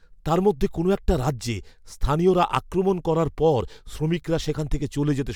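A short burst of gritty crackle rides on the loudest peaks of the speech between 2.28 and 2.57 s, a brittle edge rather than a sustained fuzz. It is hard clipping: for that stretch the signal runs about 3 dB beyond what a stage in the chain can pass, so the waveform's crests are sliced flat, and those squared-off tops throw harmonics high into the spectrum. The modest overload keeps it to crackle on peaks.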